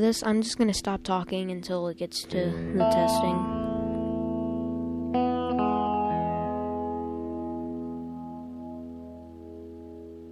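No faults detected anywhere in the audio.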